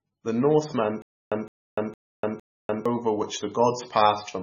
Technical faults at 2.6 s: MP3 compression; stutter with silent gaps

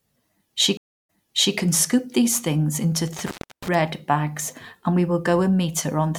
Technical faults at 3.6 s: intermittent contact

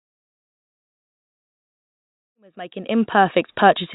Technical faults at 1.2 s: none

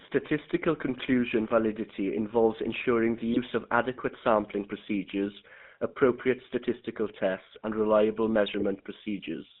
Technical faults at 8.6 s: GSM full-rate codec; GSM bit errors

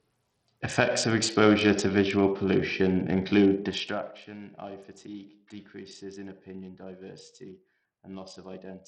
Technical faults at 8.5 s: Bluetooth SBC compression

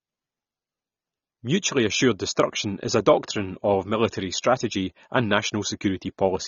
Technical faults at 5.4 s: AAC compression

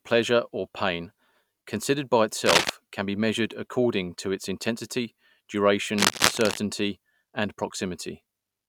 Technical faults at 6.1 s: cable scratch noise

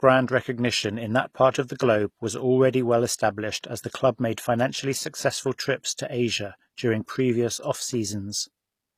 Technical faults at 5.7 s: HE-AAC compression

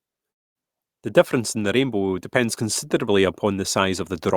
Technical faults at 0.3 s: long network dropout

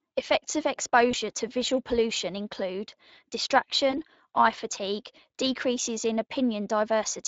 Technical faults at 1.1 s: Speex codec; VoIP packet loss concealed by the speech codec

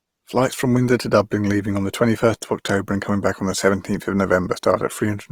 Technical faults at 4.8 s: Opus compression

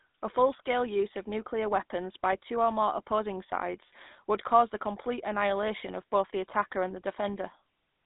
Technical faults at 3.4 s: GSM full-rate codec

